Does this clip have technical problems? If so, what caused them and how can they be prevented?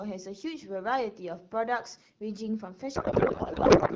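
Yes. From 2.95 s to the end, the speech suddenly gives way to garbled noise and a watery warble that barely tracks what was being said. This is a codec payload misread. The AMR wideband stream, which sounds clear at 12.65 kbit/s before this point, was packed octet-aligned but unpacked as bandwidth-efficient. The decoder therefore pulled its parameters from shifted bit positions and built sound from the wrong fields. To prevent it, make sure both ends negotiate and honour the same octet-align setting in the session description.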